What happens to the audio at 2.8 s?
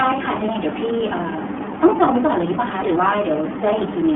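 At 2.8 s the speech is still passing through the iLBC codec, as it does for the whole clip. Each 30 ms frame is coded on its own, which fits the 13.33 kbps mode and leaves a plainly rough, synthetic edge. A spectrogram shows energy confined to roughly 200 Hz–3.4 kHz with nothing above.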